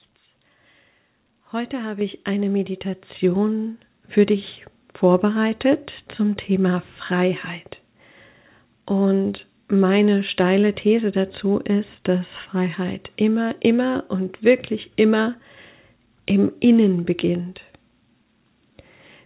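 Microphone volume stepped up at 2.01 s, just before "ich eine", and again at 3.03 s, right after "habe ich eine". The software judged the input too quiet and raised the device gain in single steps, about 6 dB then about 4 dB, so voice and background jump louder together mid-phrase. The call path's band limit, with nothing above 4 kHz, fits a narrowband telephone codec such as G.711.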